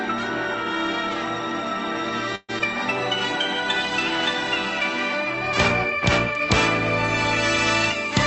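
At 2.35 s the sound stalls for about 0.15 s: the last bit is stretched into a fading buzz that trails off into roughly 30 ms of silence, then picks up exactly where it left off. That's a call audio freeze, likely delayed packets draining the jitter buffer.

Right after, at 2.59 s, there's a short concealed packet loss. About 40 ms of audio never made it, and the receiver papered over it with a quick continuation and blended back in. You hear it as a brief smear, and the stream jumps ahead roughly 30 ms as it catches up. The Opus call path's coding noise and the top end stopping near 8 kHz fit a 24 kbps setting.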